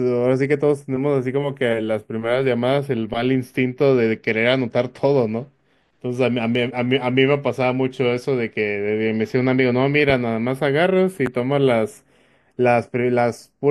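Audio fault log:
Throughout: channels drifting apart. The left and right sides run on slightly mismatched clocks, off by around 20 parts per million, so the gap between them slowly creeps out to a fraction of a millisecond. Fold it to mono and the comb notches sweep through the spectrum, giving the speech a slow flange.
11.26 to 11.29 s: loud pop. One sharp pop lands on top of the speech, peaking about 10 dB above it, while the talking carries straight on underneath. It's likely a voltage spike from a plug, switch or static discharge that the downstream circuits turned into a brief snap.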